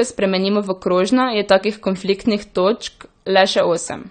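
From the first moment to the last, the speech has a dull, smeared top end with nothing above 9 kHz, and the sibilants and sustained vowels carry a warbly, fizzy texture that never lets up. That's likely AAC compression at a low bitrate, something around 32 kbps by the sound of it, where the encoder pulls the cut-off down and starves the upper bands, leaving gaps or filling them with substitute noise.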